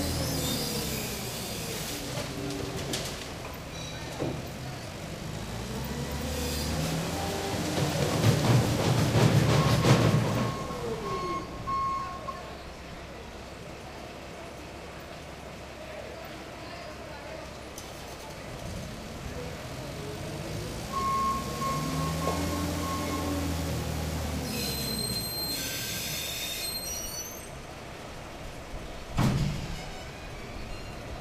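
No technical faults are audible anywhere in this audio.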